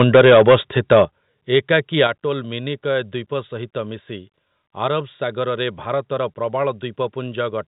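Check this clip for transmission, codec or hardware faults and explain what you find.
Two faults repeat through the opening two seconds: microphone overload and a microphone volume that steps down after it.

Microphone overload appears from 0.00 to 0.55 s, then from 0.91 to 1.02 s and from 2.00 to 2.06 s. The peaks overshoot the converter's ceiling by about 9, 6 and 3 dB respectively. In the first stretch a sizeable share of the samples is flattened, and in the last only a sliver is. The likely cause is an input gain set too high. The tops of the waveform are sheared off, which gives the loudest moments a harsh, crackling edge. Unlike codec distortion, this grit tracks level: it comes only on the peaks and eases as each burst weakens.

The microphone volume stepped down at 0.04 s, 1.05 s and 2.07 s, by about 2, 9 and 5 dB. Each step falls just after an overloaded peak. That fits call software that likely detected the clipping and cut the device's input gain in a single move. 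The sound and its background drop together, abruptly. This is what separates it from an automatic gain control ride or a fade, which glide down over a longer span. The 1.05 s drop is the most obvious. The whole clip is narrowed to below 4 kHz by the telephone coding, which is working as intended.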